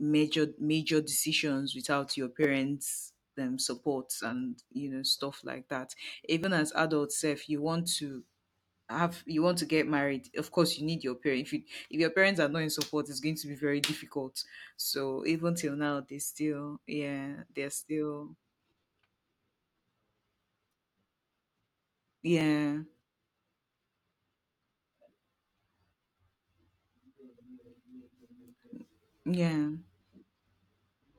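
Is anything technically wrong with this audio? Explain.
Yes. This speech has five tiny skips, at 2.44, 6.44, 10.43, 14.42 and 22.41 s, falling on a 4 s grid. One falls after "know stuff like that", one after "want to get married" and one after "to be very difficult". This is likely audio missing between chunks: a few milliseconds are dropped each time one block is closed and the next opened, and the edges are butted together. Each skip is heard as a brief jump in the speech. On a waveform it shows as an abrupt step discontinuity, and on a spectrogram as a thin vertical broadband line.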